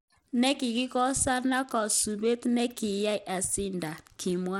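Throughout the speech, plainly audible Bluetooth SBC compression is the likely cause of gritty, unstable treble with nothing above 17.4 kHz, which fits a bitrate near 96 kbps. Unlike a clean low-pass roll-off, the coarsely coded top bands flicker and carry grainy aliasing.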